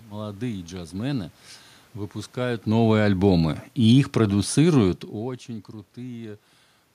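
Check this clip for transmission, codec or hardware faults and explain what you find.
One fault appears twice: automatic gain falling, from 2.63 to 3.20 s and again from 3.75 to 5.44 s. In each stretch the automatic gain control judged the input too loud, or its background noise too strong, and pulled its gain down gradually, by about 4 dB each time. The speech starts loud and sinks, and the room noise sinks with it, which marks this as a level change in the chain. The talker's own movement, around 2.5 s and again near 5 s, is separate and not a fault.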